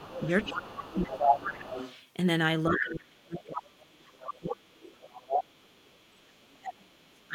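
Right from the start until about 1.74 s, the talker keeps getting pushed down in patches, by around 15 dB at worst. That's likely speech suppressed in double talk: both sides are talking at once, and the echo canceller can't tell its own talker from the loudspeaker echo, so it turns everything down.

Over that same opening stretch, out to about 1.98 s, you can hear the other side's voice leaking through, sitting only about 5 dB under the talker. It's likely leftover loudspeaker pickup that the canceller didn't fully remove.

The suppression comes back from 2.69 to 4.8 s, and it's much deeper this time, around 30 dB. Leakage returns from 3.79 to 6.57 s, fainter now at roughly 15 dB below the talker. Then from 6.58 s to the end, the talker drops out hard again, by about 35 dB.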